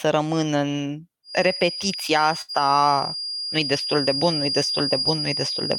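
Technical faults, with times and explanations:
1.22 s to the end, feedback whistle: Right after "rămân în" a thin, steady tone at 4.8 kHz appears and stays for the rest of the clip, sitting just a little under the speech and wavering slightly. It's likely a loudspeaker-to-microphone loop sitting right at the edge of feedback, ringing on one frequency without running away.
2.41 to 2.51 s, burst of packet loss: A run of audio failed to arrive in time. The receiver stretched the last sound for about 69 ms, fading it down as it went, then jumped ahead. Roughly 60 ms of the speech is simply missing at the join.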